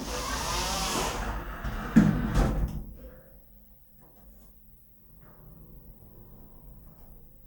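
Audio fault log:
No faults heard.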